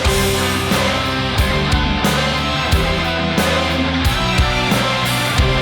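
No faults to report: level, timing and continuity hold steady throughout the recording with nothing audible breaking in.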